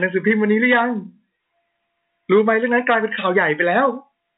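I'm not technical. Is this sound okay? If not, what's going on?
Yes, no faults are present; it is ordinary G.711 telephone-line speech, so nothing above about 3.8 kHz comes through, which is normal for a phone call.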